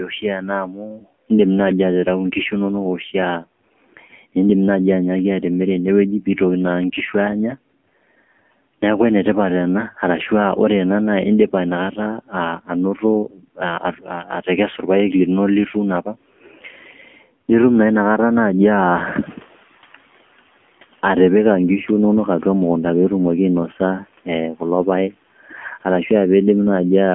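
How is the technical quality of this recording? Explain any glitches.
Technical quality is pretty rough. It's phone-grade audio with a plainly audible codec sound running the whole way through, plus a noise suppressor that keeps nibbling at the speech and once falls behind a jump in background noise.

The AMR narrowband mobile codec is on for the entire clip. Nothing gets through above about 3.5 kHz, and the usable band sits roughly between 200 Hz and 3.4 kHz, so the speech sounds boxed-in and thin. The codec rebuilds the voice from a vocal-tract model fed by a few pulses per short sub-frame, and at this level the damage is plainly audible. The buzzy, synthetic edge points to one of the lower AMR modes, around 7.4 kbps.

Speech cut by the noise suppressor happens six times: 0.00–1.06 s, 3.40–3.63 s, 12.27–14.48 s, 15.74–17.42 s, 23.78–24.62 s and 25.11–25.84 s. The suppressor mistakes parts of the speech for background and pulls them down by about 12 to 13 dB. 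The first one covers nearly the full second before "indim naai", and the one right after "indipa nakata" loses a fair chunk too. The rest are briefer, so soft consonants and endings come out swallowed or faint.

The noise suppressor catching up shows at 18.71–20.57 s. The room noise jumps by about 15 dB at around 18.5 s, and the suppressor's noise estimate lags, so the noise comes through with less reduction at first. It then sinks over about 1.9 s as the estimate adapts, ending up roughly 9 dB quieter just before "atipika ngishu inonok atua". You hear the background swell, then gradually settle.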